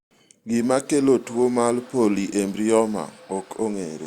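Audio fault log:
No fault is present in this speech clip.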